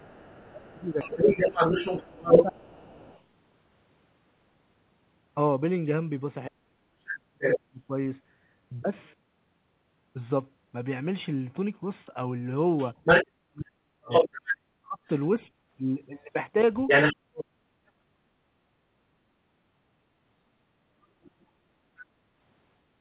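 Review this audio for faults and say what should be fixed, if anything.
Other side's voice leaking through: a second voice sits under the speech at 0.00–3.22 s and 12.77–17.16 s, about 5 dB louder than the talker, at 7.40–7.58 s at about equal level, and faintly at 21.24–21.45 s, about 30 dB down. This is likely residual loudspeaker echo that the canceller did not remove. On a spectrogram it appears as a second set of harmonic striations overlapping the talker's. To prevent it, improve echo-path modelling, or use a headset so the loudspeaker never reaches the microphone.

Speech suppressed in double talk: the talker's level collapses in pieces from 0.36 to 2.80 s (deepest drop about 20 dB, roughly 1.5 s affected), 6.48–7.94 s (about 35 dB, about 1 s), and 13.53–19.37 s (about 40 dB, about 3 s), likely because the canceller treated overlapping talk as echo. On a waveform these show as sudden notches in the envelope. 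To prevent it, give the canceller a double-talk detector that holds back suppression when both sides speak.

Background gated by the echo canceller: at 15.57–15.66 s the room sound dips by 6 dB for about 70 ms, then returns, while the loudspeaker is playing. On a spectrogram it appears as a brief vertical gap in the noise floor, and the waveform shows a short trough. To prevent it, add comfort noise or slow the suppressor's attack and release.

The G.711 call path leaves nothing above 4 kHz, visible as a hard ceiling on the spectrogram.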